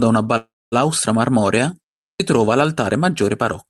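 From 0.37 to 0.74 s there is a call audio freeze: the last sound carries on as a fading buzz or hiss that falls silent for about 240 ms. Packets were likely delayed and the jitter buffer ran dry. Nothing is lost, but the speech resumes 345 ms later than it should.

At 2.07 s, after a 0.32 s pause, the start of "trova l'altare" is clipped. About 133 ms is missing because the output device had gone idle in the silence and needed time to resume, so the words begin abruptly. The speech comes through an Opus call path limited to 12 kHz.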